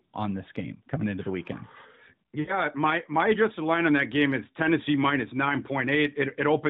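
At 2.40 to 2.58 s, lost AMR speech frames: the decoder stretches the last good speech and lets it fade rather than cutting abruptly, which fits about four 20 ms frames.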